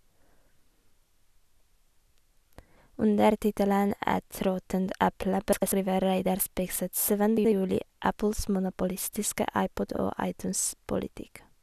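At 5.53–5.72, 7.37–7.52 and 9.94–9.99 s, frames arrive out of order: adjacent blocks of about 96, 72 and 24 ms swap places, consistent with 24 ms frames. Each produces a garbled flutter, visible on a spectrogram as abrupt vertical seams where harmonics jump.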